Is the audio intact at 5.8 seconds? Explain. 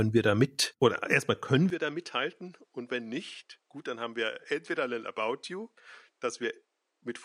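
No. An input switch to a poorer device starts at 1.70 s, right after "mit oder erstmal können", and lasts to the end at 7.25 s, so 5.8 s falls inside it. The recording likely moved to a lower-quality microphone or headset path mid-take, with no gap at the changeover. From there the sound turns duller, with nothing above 10.4 kHz. The level drops by roughly 10 dB, and a faint new background noise sits well below the speech.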